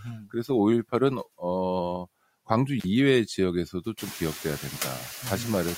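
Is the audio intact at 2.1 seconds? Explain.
No. Noise suppressor artifacts run through the whole clip, so they are present at 2.1 seconds too. The suppressor works frame by frame. It pulls down each frequency band it judges to be steady noise, by about 14 dB. The background therefore drops in the gaps and comes back up under the speech.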